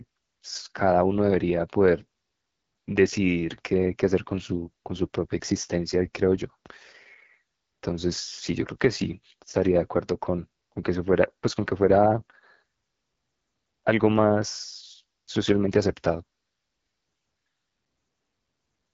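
Speech coded throughout with the AMR wideband (HD Voice) codec, and the damage is plainly audible: the voice has a rough, raspy texture that points to one of the two lowest modes, most likely around 8.85 kbit/s. The codec models speech only up to 6.4 kHz and fills the band above that with shaped noise. On a spectrogram, energy stops abruptly at about 7.4 kHz, with a smeared, noise-like strip just below that edge.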